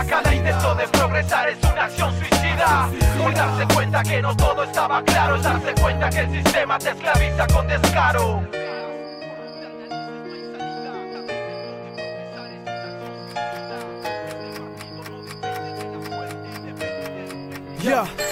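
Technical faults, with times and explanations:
No technical faults can be heard.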